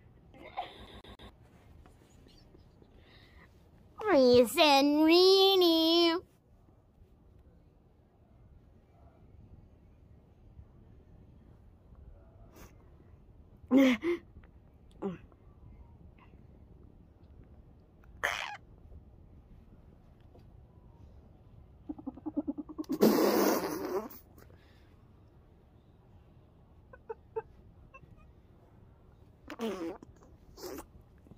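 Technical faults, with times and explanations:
0.87 to 1.29 s, CD stuck on one turn: the same 0.14 s slice of audio plays three times in quick succession, each pass cut off by a brief mute where the laser jumps back a track after hitting damage at that point on the disc. The very short, evenly spaced repeat gives the rapid mechanical stutter of a skipping CD, unlike a vinyl locked groove, whose loop lasts a whole slow revolution, far longer than this.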